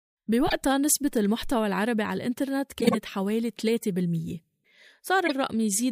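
Speech, with three short runs of corrupt frames decoded: bursts at 0.47 to 0.53 s, 2.80 to 2.95 s and 5.26 to 5.33 s, peaking around -10 dBFS, the last quieter. Damaged compressed frames were played anyway, spraying energy into the wrong frequencies.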